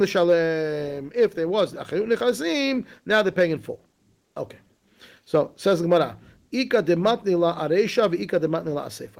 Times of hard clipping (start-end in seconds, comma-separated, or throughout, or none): none